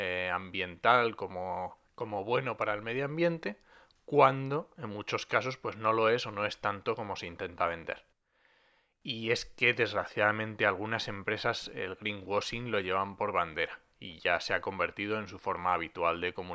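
No technical faults can be heard anywhere in the recording.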